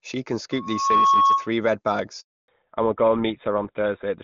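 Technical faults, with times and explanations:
0.51 to 1.52 s, loudspeaker feedback squeal: the microphone is hearing the loudspeaker it drives, and around 1.1 kHz the loop gain tops unity, so that tone feeds on itself. It swells over roughly 0.4 s into a piercing whistle sitting about 10 dB above the speech until the loop breaks.
2.20 to 2.48 s, handover gap: the call is being passed to another network, and no speech frames get through during the switch. The voice drops away almost instantly and the line stays dead for 280 ms before the new link delivers audio again.
2.48 s to the end, fallback to narrowband: after the handover the call leaves HD Voice at a rate that fits 23.85 kbit/s wideband and continues on the older 13 kbit/s GSM full-rate codec. Nothing above 4 kHz survives, so the voice turns muffled, thinner and grittier.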